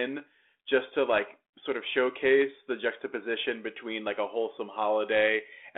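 Nothing's actually wrong with this speech clip; it's just telephone-band audio of roughly 300 Hz to 3.5 kHz carried over G.726 ADPCM at 32 kbit/s, with only the light coding texture that path normally leaves.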